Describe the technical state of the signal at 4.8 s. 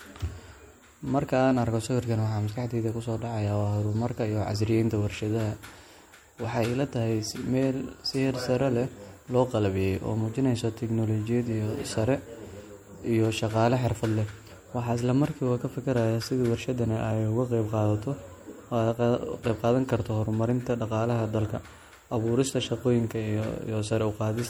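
At 4.8 s the speech carries the same plainly audible MP3 compression damage that runs through the whole clip, likely from encoding at a low bitrate, which fits something around 64 kbps. Short of bits, the encoder has dropped the weaker frequency lines, so they flicker in and out between frames. You hear that as a watery, swirly texture, with chirpy s sounds and smeared attacks.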